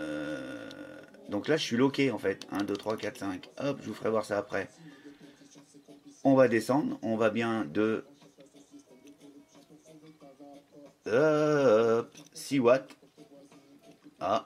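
Nothing technically wrong can be heard anywhere in this audio.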